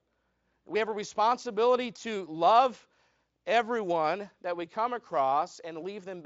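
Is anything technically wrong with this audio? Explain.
No, nothing is technically wrong with this speech recording. It has passed through the Speex codec at a high setting, which fits roughly 34 kbps, so any coding colour is faint at most and the sound stops at about 7.7 kHz.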